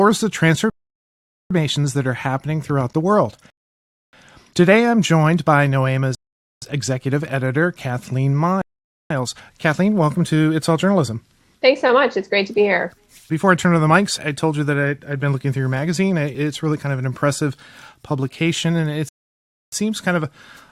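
The speech drops to dead silence five times and picks up exactly where it stopped: at 0.70 s for 0.81 s, at 3.50 s after "happening throughout the world" for 0.63 s, at 6.15 s between "I'm joined by" and "executive editor" for 0.47 s, at 8.62 s for 0.49 s, and at 19.09 s after "impressive publication and it" for 0.63 s. Each is a rebuffering stall, where the player ran out of downloaded audio and waited for more, adding time without losing any sound.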